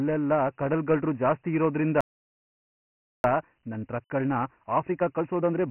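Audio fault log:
Throughout, Dialogic VOX ADPCM: the speech carries a gritty, grainy hiss that rides along with it, and nothing is heard above about 3 kHz. This points to 4-bit adaptive differential coding at a low sample rate, consistent with roughly 24 kbps. Each sample is stored as a coarse step, and the step size lags behind the signal, so the quantisation error tracks the speech instead of sitting as a steady floor. That is what separates it from ordinary background noise or a simple low-pass.
2.01 to 3.24 s, playback stall: the audio breaks off mid-flow and silence lasts about 1.23 s before sound resumes. The gap is a clean absence, with no repeated fragment, no comfort noise and no pitch glide. That sets it apart from packet-loss concealment or a looped buffer. The likely cause is the player starving for data or its thread being blocked, so nothing reached the output until it recovered.
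3.24 to 5.70 s, time-compressed catch-up: once the sound returns, the speech runs hurried at about 1.15 times normal speed, yet the pitch stays where it was. The player is working off its backlog by cutting out short slices and cross-fading the joins. Because the pitch holds steady, this is distinct from a resampling speed-up, which would raise the pitch along with the tempo.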